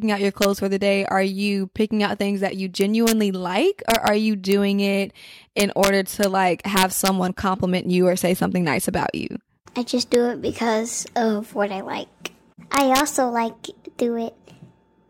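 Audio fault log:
0.42–0.45 s, 2.81–3.12 s, 3.90–4.08 s, 4.52 s, 5.60–6.24 s, 6.77–7.08 s, 10.14 s, 12.74–13.00 s: integer overflow. Speech peaks up to about 4 dB past full scale wrap to the opposite sign, making harsh cracks. The waveform jumps rail to rail, and the spectrogram shows vertical broadband streaks.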